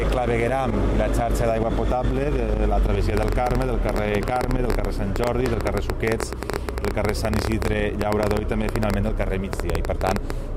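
At 3.17 s a train of clicks begins and runs until 10.31 s. The pulses arrive at about 10.9 per second, unevenly spaced, around seventy in all. Each click has much the same sharp shape. They peak roughly 15 dB above the underlying sound, so they stand out clearly as a ragged ticking. They sit on top of the audio and carry on through quiet gaps too. The likely cause is electrical interference or a faulty connection or power supply.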